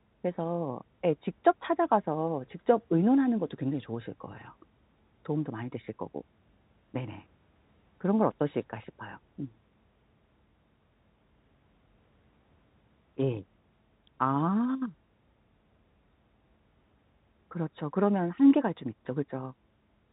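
Nothing goes wrong anywhere in this speech clip; it just sounds like an ordinary G.711 telephone line, with the usual narrow band that tops out around 3.8 kHz.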